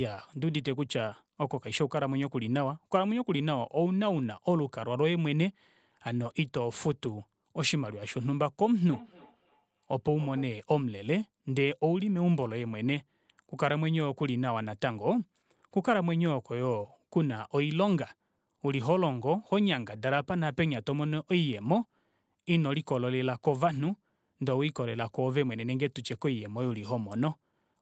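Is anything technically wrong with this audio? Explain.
Yes. From 8.91 to 10.56 s there's a feedback echo between two devices. A second device in the room replays this microphone's audio, and the mic picks it up again, which the local echo canceller can't remove. The sound returns roughly every third of a second, thin and ringing, at about 19 dB below the speech.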